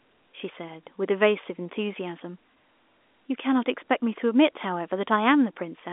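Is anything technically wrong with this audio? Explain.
No, nothing stood out on listening to this telephone-band speech recording.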